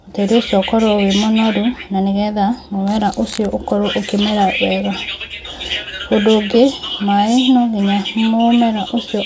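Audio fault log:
No faults can be heard anywhere in the speech recording. There is nothing here that needs a timed entry.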